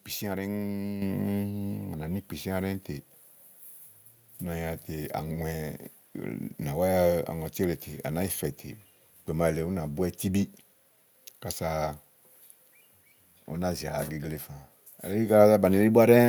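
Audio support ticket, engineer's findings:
Microphone volume stepped up at 1.02 s. Speech and background noise jump together by about 7 dB in one step. Component: capture-side automatic gain in the call software. Mic judged too quiet, so device input volume raised at once, not ramped.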